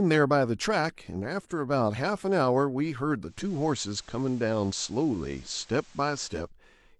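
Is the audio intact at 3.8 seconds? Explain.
No. At 3.8 s the speech is inside a digital radio blending to analogue episode from 3.20 to 6.52 s. The receiver lost its digital stream and cross-faded over 318 ms to the FM broadcast, so the level stays the same while hiss sits roughly 30 dB below the speech. On a spectrogram, a faint noise floor fills the gaps between words. The waveform shows no change in level.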